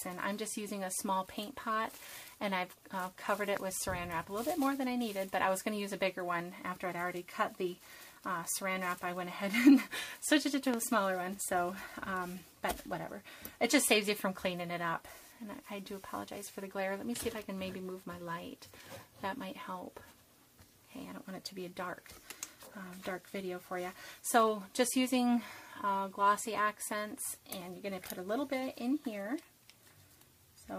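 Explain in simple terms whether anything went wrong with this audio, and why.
Two loud pops break in, at 3.57 and 10.74 seconds. Each is a single sharp click. It is likely an electrical spike, perhaps from a switch or static.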